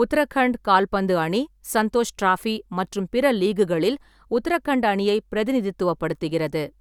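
No technical faults can be heard anywhere in the recording.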